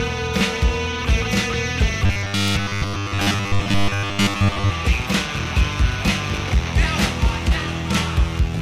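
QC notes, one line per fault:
2.06–4.71 s, robotic sound from repeated short buffers: the sound turns into a rigid, metallic buzz fixed at 100 Hz that only loosely tracks the underlying audio for most of this stretch. The likely cause is new audio arriving too slowly, so playback keeps looping the last chunk of about 10 ms to fill the gaps while the real material is skipped. Repeating a 10 ms chunk imposes its own pitch of one over that period, which is the buzz heard here.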